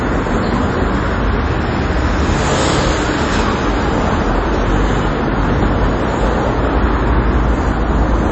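From start to finish the audio carries plainly audible damage, most likely from MP3 compression at a low bitrate, somewhere around 30 kbps. Nothing survives above 8.3 kHz, where the encoder cut the treble to save bits, and weak frequency lines drop in and out from frame to frame, giving a watery, swirling texture with smeared attacks. That flickering separates it from a simple low-pass filter, which would dull the top without any shimmer.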